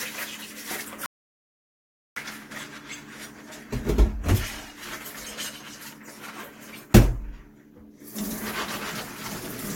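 From 1.06 to 2.16 s, an audio dropout to silence, likely from lost input, erases 1.1 s: the waveform is flat and the spectrogram blank.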